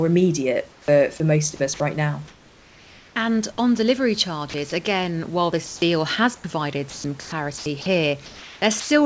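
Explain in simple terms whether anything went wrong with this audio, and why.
Comfort noise in place of the background at 0.72 to 0.88 s, 2.28 to 3.16 s and 5.66 to 5.82 s: during pauses, the real room sound turns into a smooth, blank hiss, likely because the sender stopped transmitting and the receiver filled the gaps with synthetic noise.

Sound chopped by the voice detector at 4.50 to 4.72 s and 6.90 to 8.90 s: the speech turns choppy, with bits dropping into hiss, likely because the sender's speech detector kept switching transmission off and on.

Onset clipped by the voice detector at 5.8 s: the speech starts abruptly with no soft beginning, likely because the detector reacted late and the opening instant never got sent.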